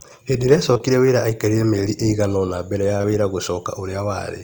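Short concealed packet loss hits twice in back-to-back pairs: 0.73 to 0.82 s, just before "wĩra aikarire mĩeri", and 2.98 to 3.05 s, after "mbele ya". Each missing 20 ms was filled by extending the preceding sound, so you hear a brief smear. A spectrogram shows smoothed, stretched harmonics or a blurred noise band there, and the waveform shows repeated cycles in place of normal variation.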